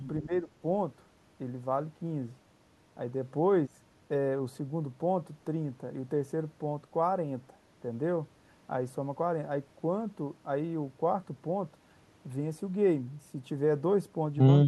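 From 0.21 to 0.54 s the speech dips by about 15 dB, likely speech suppressed in double talk, with an echo canceller mistaking it for loudspeaker echo.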